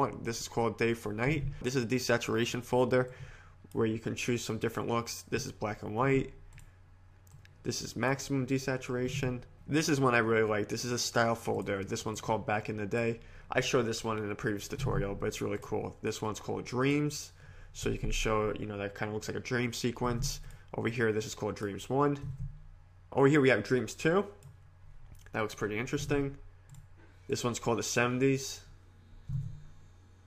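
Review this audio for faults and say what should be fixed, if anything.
Nothing here needs fixing; I listened all the way and didn't catch a single glitch worth flagging.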